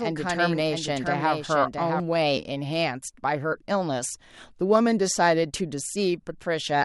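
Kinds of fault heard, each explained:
Doubled audio track: a second, full-band copy of the speech trails the original by roughly 0.7 s at about 5 dB lower, already present when the clip opens and cutting off abruptly at 2.0 s. Unlike room echo or reverb, the copy has no decay tail, no repeats and no change in tone; it is a clean duplicate. The likely cause is the same audio being captured twice, once through a slower path.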